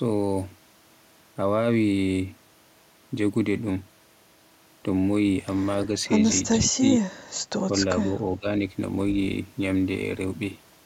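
Speech suppressed in double talk shows up from 6.6 to 6.83 s, where the level plunges by roughly 20 dB, and again from 7.71 to 8.51 s with a shallower dip. The likely cause is an echo canceller turning down this talker while the far side spoke. Both appear as notches in the waveform envelope.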